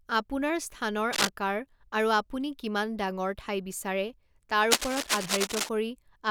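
Cable scratch noise cuts into the speech twice. The first burst runs from 1.13 to 1.29 s, lasting about 0.16 s. The second is longer, from 4.71 to 5.69 s, nearly a full second. Both are dense, ragged crackles that rustle and scrape over the speech at roughly the same loudness. The likely cause is a worn cable, connector or control being moved, so its contact resistance jumps about rapidly and injects uneven noise into the signal.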